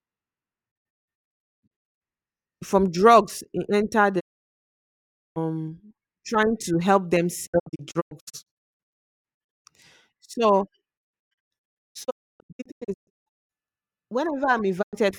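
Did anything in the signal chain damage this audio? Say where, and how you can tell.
Yes: digital broadcast dropout. The speech mutes behind quick 20 ms fades at 0.70–2.02 s, 4.19–5.38 s, 7.45–9.67 s, 10.97–13.51 s and 14.81–14.98 s, mostly as scattered short holes. The receiver lost or rejected frames and silenced them, so that speech is gone.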